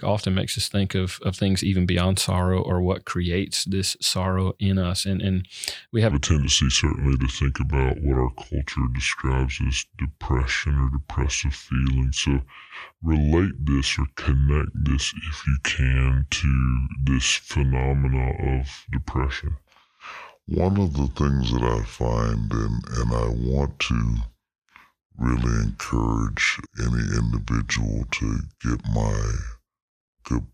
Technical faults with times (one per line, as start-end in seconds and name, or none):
6.11-30.54 section at the wrong speed